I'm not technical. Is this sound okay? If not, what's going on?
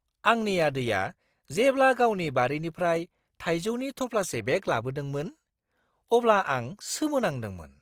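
No. The speech was likely squeezed hard with Opus compression, which saves space by roughly filling in detail it can't afford to keep. Throughout the clip, that leaves the voice sounding rough, grainy and noisy rather than clean.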